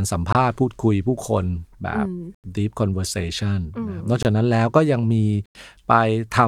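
Blocks of digital silence cut the speech at 0.33, 2.35, 4.23 and 5.46 s, lasting about 23 or 93 ms, which fits 1024- and 4096-sample buffers left unfilled. Each shows as a dead-flat waveform with sharp edges, a blank spectrogram column, heard as short holes.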